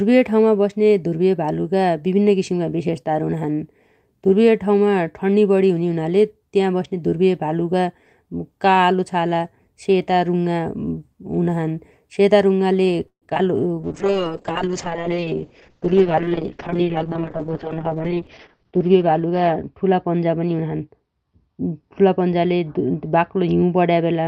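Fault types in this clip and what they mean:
Repeated packet loss (robotic sound): Between 13.07 and 13.41 s the speech turns choppy. A run of short dropouts breaks it up, and the longest lasts about 143 ms. Roughly half of that third of a second is patched by stretching the preceding sound, about 175 ms in all, while another 80 ms simply goes missing. Audio was lost or arrived too late several times in quick succession, and the receiver had to fill each hole.
Jitter buffer slow-down: From 13.75 to 14.10 s the speech drags, running at about 89% speed with its pitch unchanged, so sounds come out drawn-out. The receiver's buffer had run short or had just raised its target delay. To rebuild a reserve it repeated single pitch periods and slivers of pause over and over, adding about 46 ms to this short stretch.
Call bitrate drop: From 13.83 s to the end, the speech loses its brightness and clarity and turns muffled and rough. 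The top end falls from about 20 kHz to about 6 kHz, and the coarse, watery texture is worst for about 4.1 s. The encoder was told to spend far fewer bits, which fits a fall from around 32 kbps to about 6 kbps, so it coded more coarsely and cut the highs.
Jitter buffer speed-up: Between 15.80 and 17.23 s the speech sounds hurried, running at about 109% speed with its pitch unchanged. The buffer had built up more audio than it aims to hold, probably after delayed packets arrived in a cluster. To bring the delay back down, the receiver trimmed short pieces of one or a few pitch periods again and again, removing roughly 150 ms in total.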